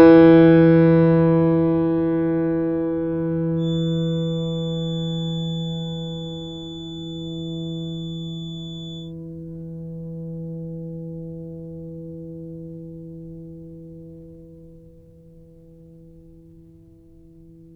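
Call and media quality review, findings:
Feedback whistle, 3.55 to 9.14 s. Thin steady tone at 3.5 kHz behind the music, roughly 20 dB below it, level swelling and fading slowly. Likely speaker-to-mic acoustic loop held just at the feedback point. One frequency sustained, not running away.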